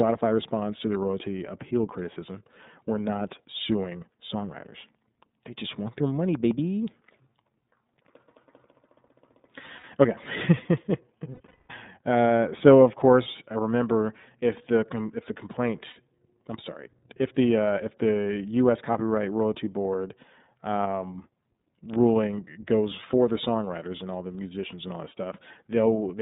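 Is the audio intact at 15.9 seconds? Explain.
No. Lost iLBC frames at 15.9 to 15.97 s: the decoder fills the missing stretch, which fits two 30 ms frames, by repeating the last pitch cycle blended with noise, giving a brief held, buzzy vowel before clean recovery. Underneath, the iLBC codec limits the band to roughly 150 Hz to 3.7 kHz and adds audible roughness.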